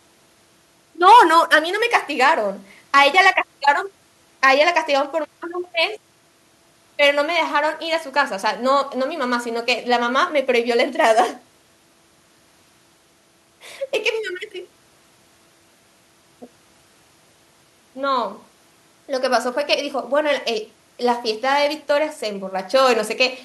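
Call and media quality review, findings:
Nothing to flag on this speech clip; no audible faults turned up anywhere in it, so there's nothing to chase for this one.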